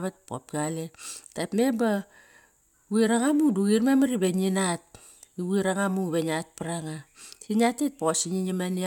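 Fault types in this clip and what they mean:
No fault types can be heard in this clip.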